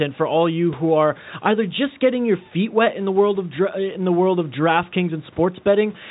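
No technical faults are audible.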